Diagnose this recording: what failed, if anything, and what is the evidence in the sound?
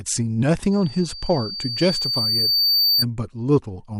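A piercing 4.6 kHz tone rises out of the speech at 0.71 s, swells over roughly two seconds to slightly above the speech, and stops at 3.05 s. This is loudspeaker feedback squeal in the analogue acoustic loop: the microphone hears its own loudspeaker, and at 4.6 kHz loop gain exceeds one, so the tone regenerates.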